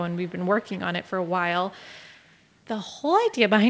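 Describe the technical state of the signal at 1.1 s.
Echo leak, 1.04 to 1.31 s: a very faint copy of the speech returns about 205 ms late, likely loudspeaker pickup that the far end's echo canceller failed to remove.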